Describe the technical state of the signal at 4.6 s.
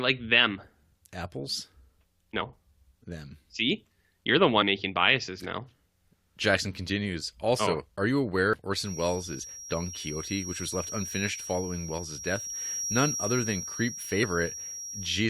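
Compressed frames skipped at 4.61 s, between "you're the" and "making biases now": whole codec frames never play, so the speech jumps ahead about a tenth of a second.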